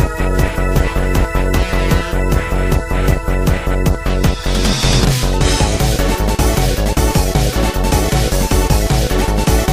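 No technical fault can be heard anywhere in the audio. Nothing in the recording calls for repair.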